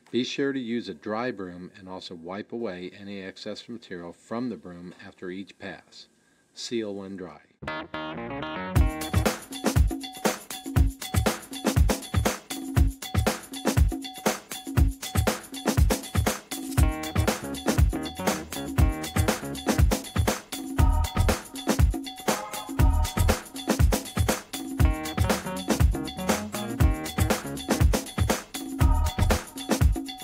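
Nothing stood out as a technical fault on listening through the recording.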